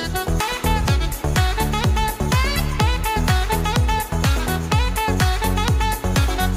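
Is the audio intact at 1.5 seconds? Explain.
Yes, the audio is intact at 1.5 seconds, with no dropout, glitch or other fault at that moment.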